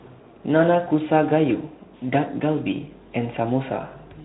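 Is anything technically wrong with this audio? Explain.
No, nothing is technically wrong with this audio.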